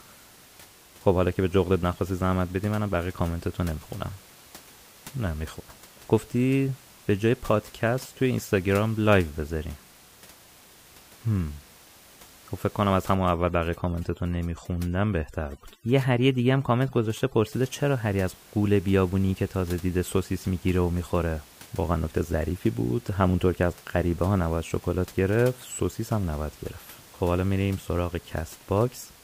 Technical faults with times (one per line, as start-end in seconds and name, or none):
13.15-17.52 overdone noise removal